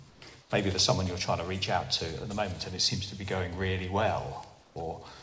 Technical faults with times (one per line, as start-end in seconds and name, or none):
0.10-0.50 comfort noise in place of the background
4.62-4.76 comfort noise in place of the background